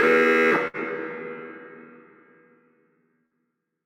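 A burst of packet loss hits at 0.67 to 0.77 s and again at 3.26 to 3.34 s. Each time about 60 ms of audio never arrived. The receiver stretched the last fragment for roughly 55 to 60 ms as a fading buzz or hiss. A spectrogram shows smeared, decaying bands, then an abrupt jump as the sound resumes further on.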